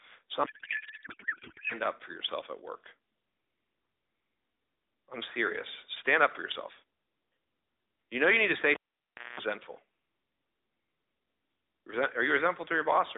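From 0.44 to 1.74 s the speech turns into garbled noise and warble: a codec payload misread, with octet-aligned AMR frames decoded as bandwidth-efficient, scrambling every field. At 8.74 s a pop opens about 0.62 s of near silence. That gap holds a 0.21 s burst of 60 Hz mains buzz, and a second pop comes at 9.40 s: a cable pulled and plugged in, buzzing while only the tip touched.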